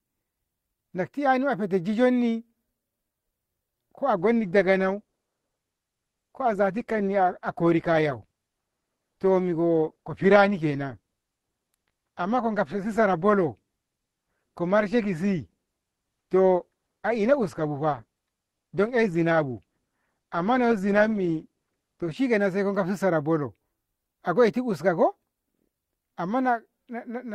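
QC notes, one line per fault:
4.17 to 22.17 s, adaptive stream at a lower bitrate: the top end suddenly cuts off, with nothing above 12.1 kHz, and the speech turns smeared before snapping back, with no gap either way. That fits the stream dropping to a low-bitrate Opus version, around 16 kbit/s, while the connection slowed.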